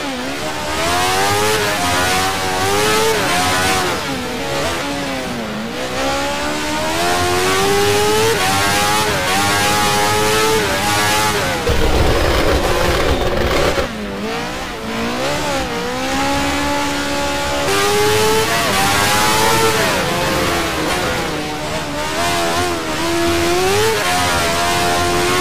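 No technical faults can be heard anywhere in the audio. Nothing in it points to a problem at any point in the recording or playback chain.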